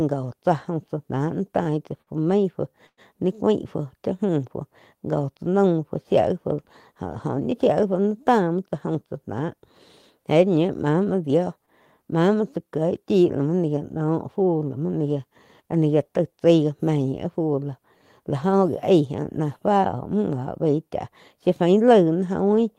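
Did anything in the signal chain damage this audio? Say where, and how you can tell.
Yes, the damage is at the network stage, where the receiver's jitter buffer ran dry. You get two short stalls from late packets, at 1.63–1.69 s and 2.02–2.10 s. In each, the last bit of speech gets held and smeared, about 23 ms the first time and 53 ms the second, with a faint buzzy sustain. Then it picks up exactly where it left off, so nothing is lost. It just shows up later, by the length of the stretch.

The bigger one is a call audio freeze from 2.86 to 3.00 s. The sound hangs as a fading buzz for about 111 ms, with roughly 60 ms of that dropping to silence before the speech resumes right where it stopped. That's likely packets held up in transit long enough for the buffer to empty, with the receiver padding the wait. No content goes missing, but it inserts a hitch and pushes everything after it about 111 ms later.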